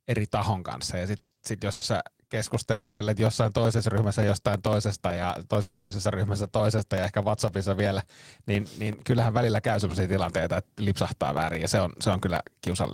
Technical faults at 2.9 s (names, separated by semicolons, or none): periodic USB or driver dropouts; call audio freeze